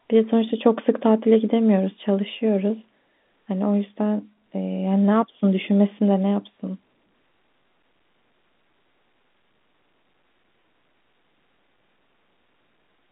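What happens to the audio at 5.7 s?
At 5.7 s the speech carries on intact, with no fault at that moment, just the steady narrow telephone-band sound of its G.711 coding.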